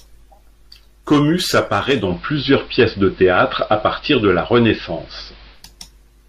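At 1.98 s the digital radio blends to analogue AM, returning at 5.66 s. Treble is reduced. Level shifts about 3 dB. Faint hiss appears.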